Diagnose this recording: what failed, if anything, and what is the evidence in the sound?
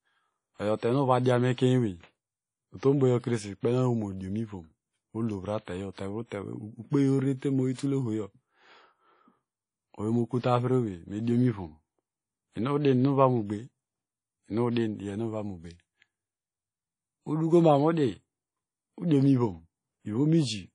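Throughout the speech there is a ringing, washy quality with hiss that swells and fades with the signal, and nothing above about 10.1 kHz. The codec stage is the likely culprit: WMA compression at a low bitrate, consistent with roughly 32 kbps, smearing quantisation noise and zeroing weak components.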